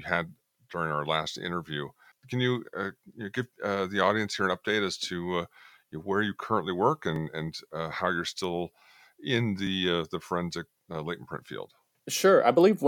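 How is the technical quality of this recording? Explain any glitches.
The recording has one recurring glitch, overlapping chunks, heard as brief ticks at 4.66, 7.16 and 12.18 s. The audio was handled in 2.5-second blocks, and at each join the new block began about 7 ms early, so that sliver of speech plays twice. The doubled fragment sounds like a tiny click or stutter. Unlike a dropout, nothing is lost. The material repeats, and the ticks are spaced at multiples of 2.5 s.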